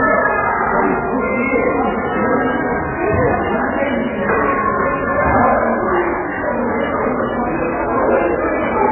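Everyday sounds run through heavy MP3 compression from start to finish: nothing survives above 3 kHz, and weak detail warbles in a watery, swirly way as it drops in and out. A spectrogram would show a hard ceiling at 3 kHz with patchy, flickering blocks below, likely from a very low bitrate around 8 kbps.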